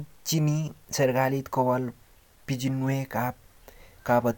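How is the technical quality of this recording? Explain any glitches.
I can hear no glitches anywhere in this recording.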